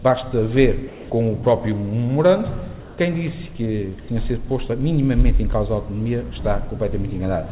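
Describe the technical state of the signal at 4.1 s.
Just before 4.1 s, from 4.00 to 4.08 s, the sound drops out and is replaced by a soft, steady hiss, and then returns. This is most likely sound dropped by the voice detector: the sender judged about 50 ms of real, low-level sound to be background, stopped transmitting, and the receiver filled the 80 ms gap with generated comfort noise. Unlike packet-loss concealment, which smears or repeats the preceding sound, this gap holds flat, featureless noise with no trace of the original, band-limited like the rest of the telephone-band path with nothing above 4 kHz.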